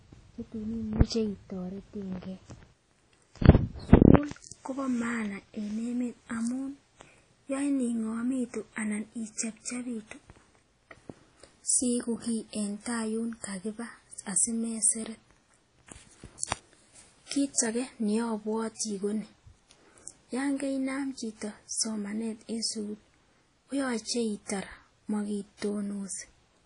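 Right from the start the speech has a washy, ringing quality with hiss that swells and fades along with it, and nothing comes through above about 10.1 kHz. That's most likely WMA compression, with the damage plainly audible and consistent with a bitrate around 32 kbps.

Then there's pre-echo in two quick bursts, from 16.38 to 16.43 s and from 16.46 to 16.51 s. The codec spread its noise over a whole block, so a short hiss of about 50 ms leaks in ahead of each sharp onset and blurs the attack.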